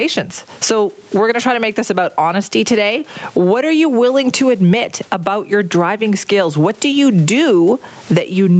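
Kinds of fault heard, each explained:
Gain pumping: likely an input gain set far too high, with a fast limiter clamping each loud moment, so the gain swings roughly 15 dB.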